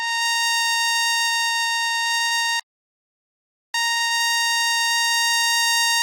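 A music clip with a playback stall from 2.60 to 3.74 s: the music halts mid-flow for about 1.14 s, which likely comes from the player running dry of data or its audio thread being blocked. On a waveform this is a flat, silent gap; on a spectrogram, a blank vertical band. A time-compressed catch-up follows from 3.74 s to the end, with the music hurried at about 1.25x but kept at its normal pitch by splicing and cross-fading small fragments. The spectrogram shows harmonics at their usual heights while events arrive closer together.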